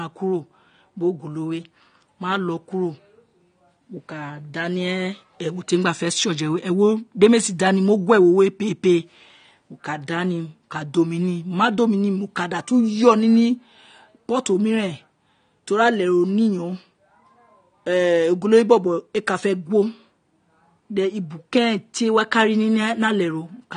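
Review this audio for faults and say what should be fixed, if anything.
Throughout the speech, nothing sounds above 9.7 kHz, leaving it dull and smeared, with plainly audible codec damage. This is likely AAC compression: AAC-LC at a low bitrate, fitting roughly 32 kbps, discards upper bands. A spectrogram shows a flat ceiling at 9.7 kHz. Encode from the original source at a higher bitrate, or keep a lossless copy.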